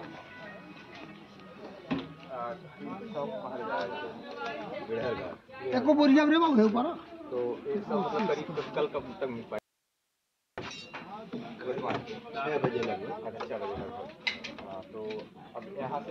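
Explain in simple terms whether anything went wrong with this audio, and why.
At 9.59 seconds the sound abruptly vanishes, leaving only faint hiss, and snaps back at 10.58 seconds, about one second later. This is an audio dropout to a faint residue, likely a brief loss of the incoming signal while the recording chain stayed switched on.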